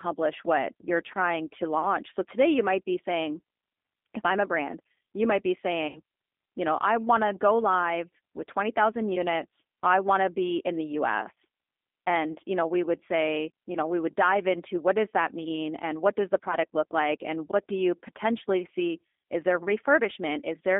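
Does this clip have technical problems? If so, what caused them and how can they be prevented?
Yes. Throughout the clip, the speech passed through a G.729 codec, the G.729A variant, at a rate consistent with 8 kbit/s. It rebuilds each 10 ms frame from a vocal-tract filter, a pitch predictor and a few pulses rather than from the waveform itself. The line is confined to roughly 250 Hz to 3.6 kHz, so the voice sounds thin and boxy, and the coding damage is plainly audible as a rough, slightly synthetic texture. To prevent this, carry the call on a wideband codec such as G.722 or Opus.

There are two instances of VoIP packet loss concealed by the speech codec. Packets were dropped, and the decoder filled each gap by extrapolating from its last pitch and filter settings while lowering the gain. The first gap runs from 5.88 to 5.99 s, between "brand you might be" and "you know I want". It lasts about 70 ms, which fits seven lost frames, and the sound smears into a fading buzzy tone or coloured noise. 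The second, from 12.32 to 12.37 s just before "you know we would", is about 30 ms long, three lost frames. To prevent both, use a stable, prioritised network path with QoS and an adequately sized jitter buffer.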